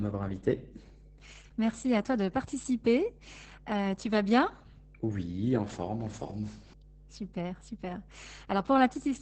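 From the first moment to the end, a steady mains hum at 50 Hz sits under the speech, together with its low harmonics. It sits roughly 20 dB below the speech. The hum comes from power-line current leaking into the signal path, typically via a ground loop between connected equipment or magnetic coupling from a nearby transformer. It sounds like a constant low drone independent of the talker.

Also present throughout is heavy Opus voice compression. The coder is running in its SILK linear-prediction mode at wideband, and no content survives above 8.4 kHz, so sibilants and breath lose their top edge. The damage is severe, consistent with a bitrate of about 10 kbps. SILK models the vocal tract and spends very few bits on the excitation, so the speech comes out muffled and hoarse with a faintly robotic, buzzy texture.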